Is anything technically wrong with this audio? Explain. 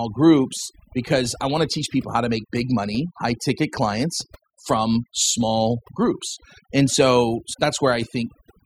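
Yes. Overdone noise removal runs through the whole speech clip. The noise reduction was pushed too hard, so any frequency band sitting near the level it treats as noise is pulled far down or cut out entirely. The quieter parts of the speech fall below that threshold and get removed along with the noise. The pauses drop to near silence flecked with twinkling artefacts.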